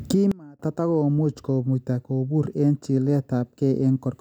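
Right near the start of this speech recording there's a sudden gain jump: at 0.32 s the level drops by about 24 dB in a single step and stays down until 0.60 s, then snaps back. The voice and the background noise fall away and return together, with no fade on either edge. That points to a gain setting or bit shift applied instantly, likely with no ramp to smooth the change in and out.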